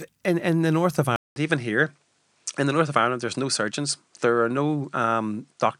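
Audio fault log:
1.16–5.80 s, input switched to a poorer device: after a 200 ms gap the speech loses everything above 9.9 kHz and picks up a faint new hiss well below it, at much the same level, likely because the recording jumped to another microphone or headset.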